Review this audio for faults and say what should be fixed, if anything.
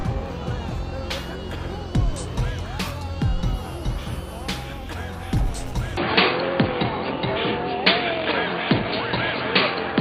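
The input likely switched to a poorer device at 5.97 s, with no gap at the change. From there to the end nothing passes above 4.7 kHz, so the sound turns dull and boxy, shifts in level by around 5 dB, and gains a faint new background noise. Locking the recording to one fixed input device, with automatic switching to headset call profiles disabled, would prevent this.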